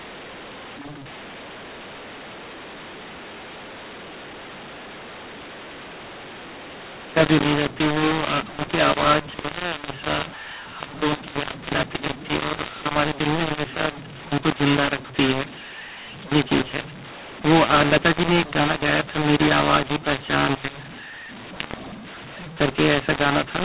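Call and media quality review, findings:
mu-law and A-law mixed up, throughout: harsh distorted speech, hiss in pauses. mu-law stream decoded as A-law; waveform levels scrambled, spectrogram gaps filled with noise.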